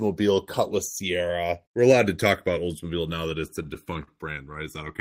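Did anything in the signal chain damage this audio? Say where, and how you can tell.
Yes. Throughout the clip, the two channels come from converters on separate clocks that are drifting apart, off by roughly 150 ppm. Their offset grows to about a millisecond, heard as slow flanging.

The network jitter buffer caused repeated stalls (stutter) between 3.47 and 4.09 s. Seven underruns were concealed by stretching sound, longest 42 ms, totalling 99 ms, so the speech drags.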